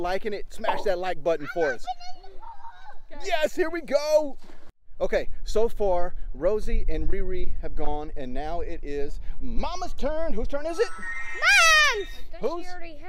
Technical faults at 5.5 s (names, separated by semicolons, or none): none